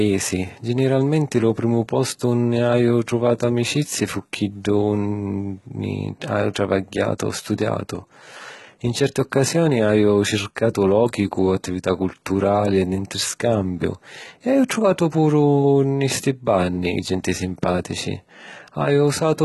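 From start to finish the speech carries heavy codec damage, likely HE-AAC compression at a rate that sounds near 16 kbps. Only the lower band is truly coded; the treble is rebuilt by copying lower bands upward, so s sounds come out gritty, metallic and lispy. On a spectrogram, the upper band shows blocky, smeared patches that echo the lower harmonics, and everything stops sharply at 11.8 kHz.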